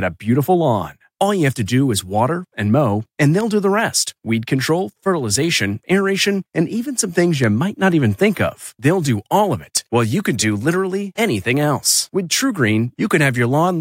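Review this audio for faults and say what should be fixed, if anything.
Bit error spikes at 3.41, 7.44 and 9.77 s: a flipped bit briefly throws three samples by a power of two, producing sharp ticks peaking around -9 dBFS. Each appears as a needle on the waveform and a thin full-height vertical line on the spectrogram. Prevent this with error-checked memory and links, such as ECC or checksummed transfers, and then repair these three ticks with interpolation.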